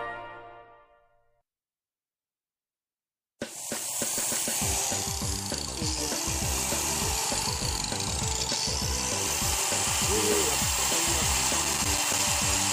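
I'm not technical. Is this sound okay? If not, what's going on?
No. Two bursts of loose connector crackle break in, from 7.57 to 7.82 seconds and from 11.62 to 12.24 seconds. A worn or dirty plug contact is flickering on and off. That chops the sound and adds rough scratching. Cleaning or replacing the cable usually fixes it.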